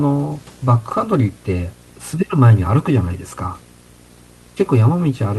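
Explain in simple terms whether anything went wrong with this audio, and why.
Something did go wrong: there's video or display buzz running under the speech from start to finish. A screen or video cable was leaking into the audio, so you get a low buzz at about 60 Hz, matching the picture's refresh rate, with a gritty hash on top and a very high whine near 15.7 kHz from the picture's scan lines. It's fairly quiet compared with the voice, but steady, and the faint room noise behind it isn't part of the problem.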